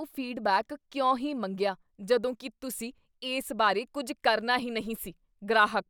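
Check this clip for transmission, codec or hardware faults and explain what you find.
Nothing in the speech points to a transmission, codec or hardware problem.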